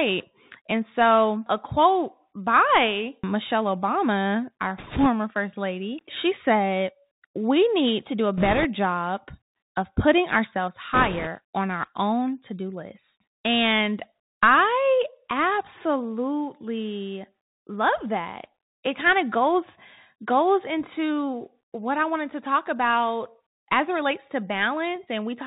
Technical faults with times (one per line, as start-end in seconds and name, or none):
0.00-25.47 Bluetooth CVSD headset codec
4.78-5.07 bit errors on a Bluetooth voice link
8.37-8.66 bit errors on a Bluetooth voice link
10.94-11.28 bit errors on a Bluetooth voice link